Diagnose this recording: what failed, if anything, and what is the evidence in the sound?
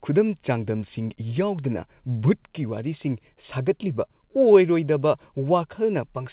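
No failure; the call path carries the speech normally.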